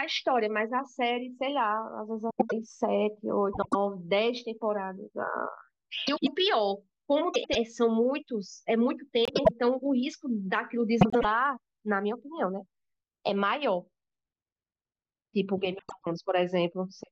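Frames out of order appear at 2.30–2.53, 3.52–3.75, 6.07–6.28, 7.34–7.55, 9.25–9.51 and 11.01–11.25 s. Each time, two neighbouring runs of frames, which fits blocks of four, were decoded in swapped order, so a stretch of about a quarter second plays its halves back to front. The speech briefly turns into a garbled flutter. Unlike a dropout or a skip, nothing is missing and the timing stays intact.

From 13.35 s to the end, channel delay (comb filtering) sets in. One channel lags the other by only a couple of samples, a few hundredths of a millisecond, and the mono sum cancels energy in evenly spaced notches starting near 10 kHz. Because the first notch sits so high, the speech sounds dulled at the top rather than hollow through the midrange. The colouration is fixed and steady, unlike the brief flutter of the swaps.

Within that stretch, one more frames-out-of-order event falls at 15.79–16.03 s, with the same quarter-second scramble layered over the dulled tone.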